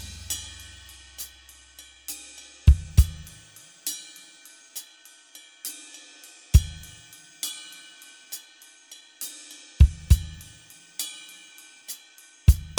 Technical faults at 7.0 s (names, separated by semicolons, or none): none